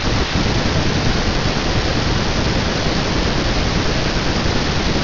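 Aliasing runs through the whole speech clip. The rate was dropped without a proper low-pass first, so content above 6 kHz folds back down as gritty, metallic hash on sibilants, fairly loud at roughly 10 dB under the speech, which points to a 12 kHz sample rate.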